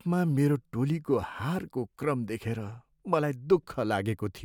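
No faults can be heard anywhere in the speech recording.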